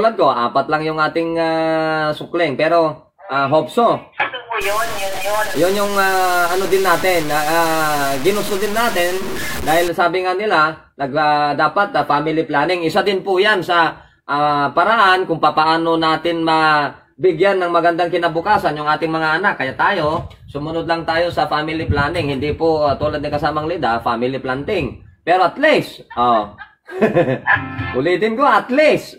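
From 4.62 to 9.88 s the sound turns gritty, its grain tracking the signal. Likely low bit depth without dither, fitting 4-bit truncation.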